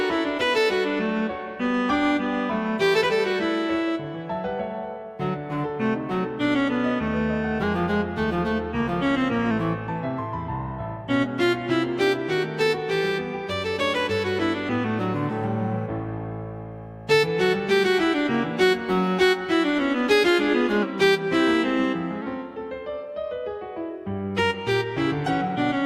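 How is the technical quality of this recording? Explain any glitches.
Two brief pitch-and-speed glitches affect the recording. From 7.63 to 9.51 s the audio runs 5.76% fast, about 97 cents sharp, then snaps back; from 20.83 to 22.22 s it runs 5.76% slow, about 103 cents flat. This is likely a drift correction step, where clock-matching software abruptly changes playback rate to rebalance its buffer, causing roughly a semitone of detuning.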